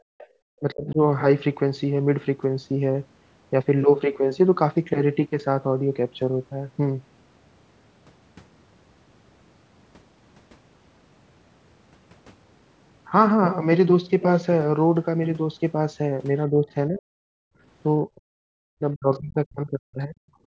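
Background gated by the echo canceller opens the clip, from 0.00 to 0.31 s. While the loudspeaker is playing, the canceller treats the microphone as carrying echo and clamps it down, so the room sound sinks by about 36 dB for around a fifth of a second before it recovers. Inside that window, from 0.18 to 0.26 s, the other side's voice leaking through appears as a faint scrap some 25 dB below the talker. It is likely residual loudspeaker echo the canceller failed to subtract from the microphone signal.

Speech suppressed in double talk follows at 0.59 to 1.00 s. The talker's voice dips by roughly 25 dB over a few tenths of a second, likely because both ends spoke at once and the canceller, unable to separate near speech from echo, attenuated everything. The same fault returns at 16.50 to 17.07 s, deeper this time, with the voice pulled down by around 40 dB.

The background gating recurs at 17.35 to 17.61 s, where the room tone drops out by about 40 dB and then returns.

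The longest suppression runs from 18.07 to 20.20 s. The voice is chopped and sunk by up to around 40 dB across about two seconds. Within it, at 19.13 to 19.17 s, another brief leak of the far-end voice surfaces, some 35 dB under the talker. The clip ends with a final burst of gating from 20.48 s, a short dropout of about 40 dB.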